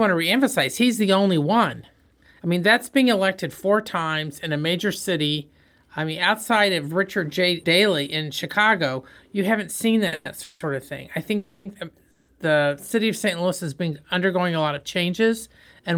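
A short stall from a late packet comes at 10.07–10.13 s in this speech, just after "you haven't seen": a packet arrived late, the jitter buffer ran empty, and the last sound was held for 50 ms before playback resumed with nothing lost. Call audio freezes follow at 10.14–10.26 s, 10.43–10.61 s (ending just before "of thing I"), 11.37–11.66 s and 12.11–12.29 s, lasting 110, 170, 280 and 170 ms. In each, the last sound drags on as a fading buzz or hiss, briefly dropping to silence for about 10 ms in the second. Packets likely stalled in transit and drained the buffer. Each time the speech then picks up where it stopped, adding a pause rather than losing anything.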